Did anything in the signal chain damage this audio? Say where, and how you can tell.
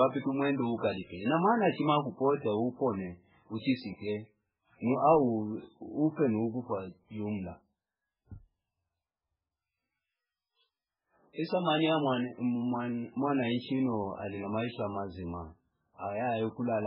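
Yes, likely the codec: heavy MP3 compression throughout. The speech sounds watery, with nothing above 5.3 kHz, pointing to a bit-starved encoder near 8 kbps.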